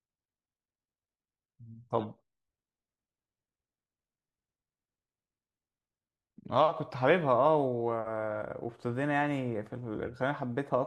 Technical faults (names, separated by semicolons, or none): none